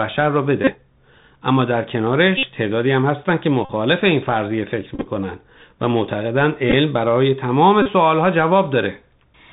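Throughout, the speech carries the Bluetooth CVSD headset codec, which fits a 64 kbps narrowband headset link: nothing above 4 kHz survives, s sounds turn scratchy, and a granular hiss sits underneath. That hiss and the overload grit on loud high sounds set it apart from a plain low-pass filter.

Bluetooth headset packet repeats come at 0.64, 2.37, 3.65, 4.95, 6.70 and 7.82 s, each lasting roughly 30 to 70 ms. Replaying the last packet every 3.75 ms gives a steady buzz near 267 Hz rather than a silent dropout. At 4.95 and 6.70 s the losses are scattered in short bursts, so the buzz breaks up.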